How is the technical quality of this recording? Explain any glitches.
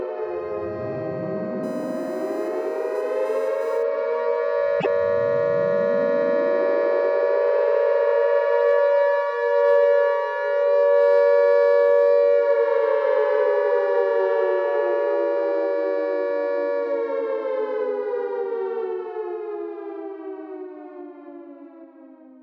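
The recording has two clear glitches.

From 1.63 to 3.83 s a steady, fixed-pitch whine sits at 1 kHz, roughly 30 dB below the program. This is USB whine: the bus draws current in 1 ms frames, and that pulsing leaks into the audio through power or ground.

Between 4.80 and 4.87 s the audio lurches forward with a brief garbled disruption. The likely cause is a broken MP3 bit reservoir. Frames borrow bits from earlier ones, so a dropped stretch, consistent with 26 ms frames, leaves the following frames decoding someone else's data.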